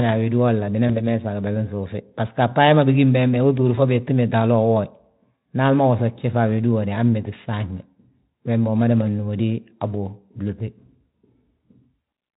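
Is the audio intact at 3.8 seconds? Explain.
No, there's a dropout there from 3.75 to 3.79 s: VoIP packet loss concealed by the speech codec. It sounds like a single 20 ms frame went missing, so the decoder stretched its last pitch and filter into a brief buzzy tone or coloured noise that fades, and the speech sounds thin for a moment after.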